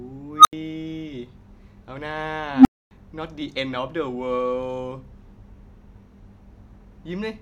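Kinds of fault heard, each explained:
unstable filter: tones near 1.5 kHz and 300 Hz swell sharply, then cut to silence, as a recursive filter's output grows unchecked and overflows.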